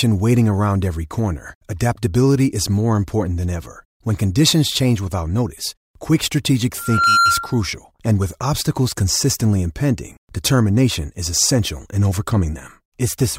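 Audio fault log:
6.77 to 7.63 s, loudspeaker feedback squeal: right after "without notice quick strategic", a single tone at 1.4 kHz swells up over roughly a third of a second and sits about 5 dB above the speech until "and with obstacles consistently". The mic is hearing its own loudspeaker, and at that one frequency the loop gain tips past unity, so the tone keeps feeding itself and climbs into a steady whistle.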